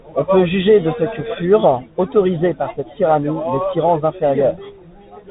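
Speech that sounds boxed-in and dull, with nothing above 4 kHz, scratchy s sounds, distortion on loud bright passages and a grainy hiss beneath, all the way through. This is the Bluetooth CVSD headset codec, whose one-bit adaptive steps fit a 64 kbps link and cannot track fast changes.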